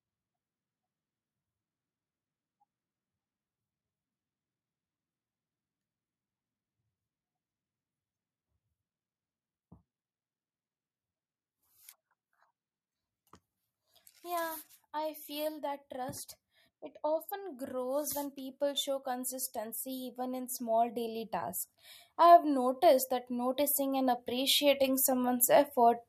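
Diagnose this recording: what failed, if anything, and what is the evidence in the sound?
Automatic gain rising, in call processing. Speech and background swell together at 13.88–16.23, 17.01–21.61 and 22.17–26.04 s. Gain climbs about 4, 8 and 7 dB, lifting quiet input.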